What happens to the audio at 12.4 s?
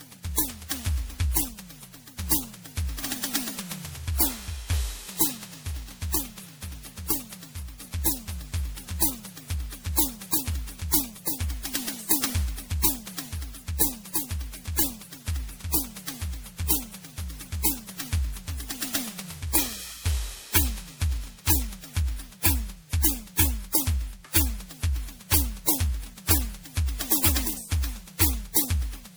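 Generation loss is present at 12.4 s and throughout the music. It likely comes from repeated lossy re-encoding, around ten passes, which fits MP3 at about 96 kbit/s. Each pass requantises on a shifted frame grid, so the sound is swirly, hollow and smeared, with blurred attacks.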